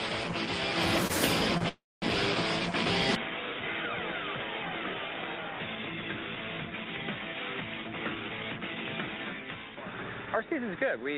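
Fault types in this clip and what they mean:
short stall from a late packet: a packet arrived late, so the receiver held the last sound briefly, at 1.07 s for 23 ms and 1.58 s for 29 ms; spectrogram shows smeared, frozen frames.
call audio freeze: a longer wait at 1.69 s, likely from held-up packets, stretches sound into a fading buzz, then 220 ms of silence; 334 ms inserted, visible as a flat waveform gap.
input switched to a poorer device: from 3.15 s the spectrogram shows nothing above 3.8 kHz, the level drops about 10 dB, and a new noise floor appears, likely a different microphone.
jitter buffer speed-up: from 7.78 to 8.60 s short pitch-period slices are cut, about a tenth of a second in all, so the sound runs 110% fast at unchanged pitch.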